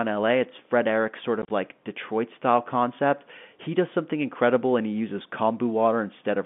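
A speech recording carried over a G.711 A-law telephone line, its band limited to roughly 150 Hz to 3.5 kHz, breaks up briefly between 1.42 and 1.5 s through packet loss filled with silence. About 50 ms of audio is missing across that 80 ms stretch, in short gaps up to 30 ms long, which fits 10 ms packets. The receiver played nothing in their place, so each gap starts and stops abruptly. On a waveform these show as flat silent stretches with vertical edges. A spectrogram shows narrow blank columns crossing every frequency.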